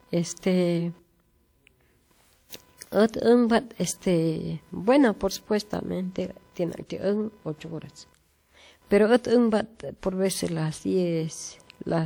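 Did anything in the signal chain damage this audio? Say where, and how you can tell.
Yes. A buzzy, chirping layer sits under the speech for the whole clip, pulsing at around 500 times per second and roughly 35 dB below the speech. It doesn't follow the speech's rhythm or level. This is computer activity noise entering at the analogue wiring stage: as the processor, graphics card or mouse draw changing current, the ground the audio circuit shares with them shifts, and that fluctuation is added to the signal.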